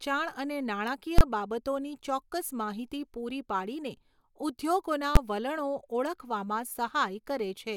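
Sharp bangs hit the speech at 1.18 to 1.21 s and at 5.16 s. These are invalid numbers at full scale: a failed calculation pinned each short block at maximum level.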